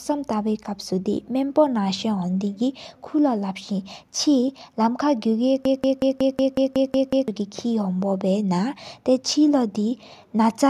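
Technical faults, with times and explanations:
5.65 to 7.28 s, broken-record loop: one 184 ms speech fragment repeats nine times, likely a stalled stream resending it; spectrogram shows identical tiled blocks.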